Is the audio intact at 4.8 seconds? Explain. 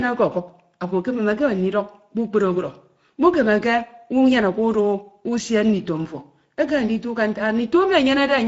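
No. At 4.8 s the speech carries Speex codec damage, which runs through the whole clip. The CELP coder has few bits for the excitation, leaving the voice noisy and hoarse, which fits a mid-rate setting near 17 kbps. Nothing sounds above 7.7 kHz.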